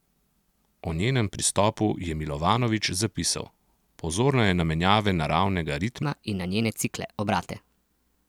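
A playback or editing step most likely ran the final portion of this speech on the wrong clock, giving a section at the wrong speed. From 6.03 s, right after "je na menjave naravnega", to the end at 8.28 s, the audio runs 1.2 times faster than it was recorded. Speed and pitch rise together the instant the section begins, so the voice jumps up about three semitones and sounds hurried and thin.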